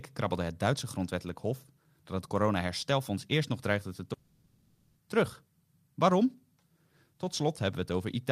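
At 4.13 s the speech turns into a smeared, fading buzz until 4.97 s, then resumes with a section missing. This is likely a long network dropout.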